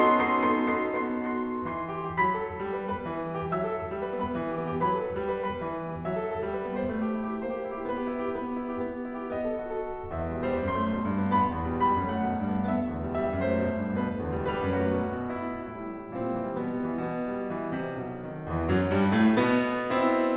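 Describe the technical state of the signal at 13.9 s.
At 13.9 s the music is intact, with no dropout, glitch or distortion, only the narrow band of a G.711 call path that leaves nothing above 4 kHz.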